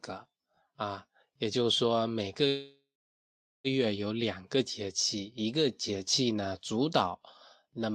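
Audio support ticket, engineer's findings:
Sample clock jitter, throughout. Converter clock unstable at well under a microsecond RMS, so each sample lands slightly early or late. Timing error scales with waveform slope: faint hiss/roughness around 45 dB below the speech, rising on loud, bright syllables, gone in pauses.

Call audio freeze, 2.47–3.67 s. Likely cause: packets delayed in transit, jitter buffer ran dry. Receiver extends last sound as a fading buzz or hiss, then about 0.79 s of silence. Stream resumes where it stopped. Nothing lost, but 1.17 s gap inserted, delay grows by that amount.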